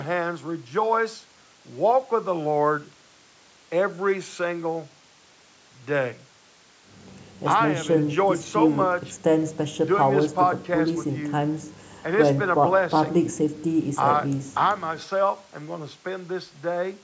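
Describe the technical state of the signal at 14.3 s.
At 14.3 s the signal is intact, with only the normal band limit of the call microphone processing, which leaves nothing above 8 kHz.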